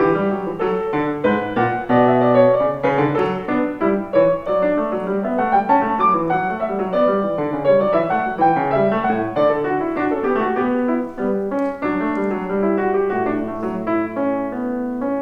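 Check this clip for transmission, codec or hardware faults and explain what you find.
Nothing to report: no faults are audible anywhere in the clip.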